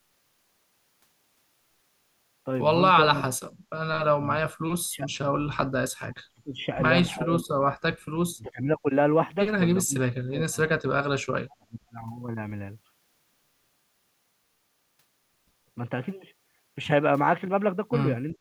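Speech suppressed in double talk hits this speech clip at 3.06–3.22, 4.17–5.22, 5.66–6.64, 7.19–7.83, 8.35–8.85, 9.84–9.96, 10.29–11.95 and 18.34–18.40 s. The voice sinks or drops out, from about 10 dB to about 40 dB. The likely cause is an echo canceller failing to separate the near-end talker from overlapping far-end echo and attenuating both.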